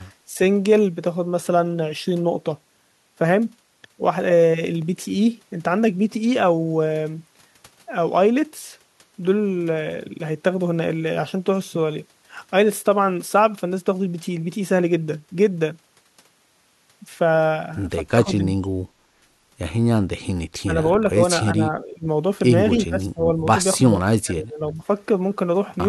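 From 18.15 to 18.85 s the speech drops sharply, by roughly 30 dB, then recovers. This is speech suppressed in double talk. Shorter dips follow at 20.64, 21.12, 21.51 to 22.07, 22.87 to 23.21, 23.78 to 24.0, and 24.21 to 24.82 s. Their depth varies from slight to deep. The voice thins or breaks into pieces. The likely cause is an echo canceller that cannot tell the near talker from loudspeaker echo, so it turns both down.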